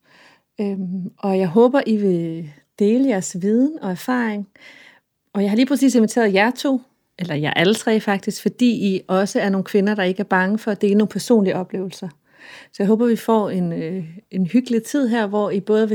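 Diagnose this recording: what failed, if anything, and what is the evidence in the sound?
Nothing failed; no faults can be heard in the speech.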